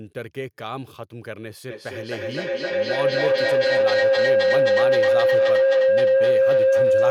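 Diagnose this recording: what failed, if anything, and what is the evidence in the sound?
An acoustic loop formed between two devices on the same call in one room: each trip from microphone to loudspeaker and back came out louder than it went in. From 1.7 s to the end, a feedback howl builds instead of decaying, narrowing onto a tone around 500 Hz and pulsing roughly every 300 ms, the loop's round-trip delay. At its loudest it sits about 13 dB above the speech and never resolves, because nothing broke the loop.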